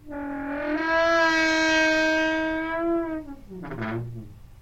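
Nothing in this recording of sounds points to a technical fault: the signal holds steady and intact throughout, with nothing audible that would indicate a problem in how it was captured, processed or played back.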